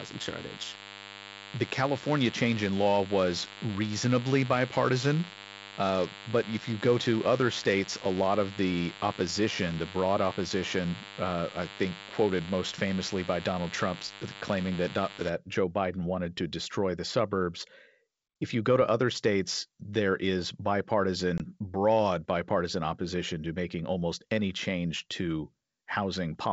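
From the start to 15.3 s, a thin, steady buzz rich in harmonics sits under the speech, fairly strong at around 10 dB below it. It is DECT cordless phone buzz: a nearby handset or base station sends a radio burst every 10 ms, and the audio circuitry rectifies those bursts into a 100 Hz tone.

At 21.38 to 21.41 s, the speech drops into an abrupt, hard-edged gap of about 20 ms, then returns slightly distorted, with brief roughness. This is packet loss on an ADPCM call. Apparently a single packet was replaced with silence, and the decoder's predictor and step size lost step with the sender's until they resettled.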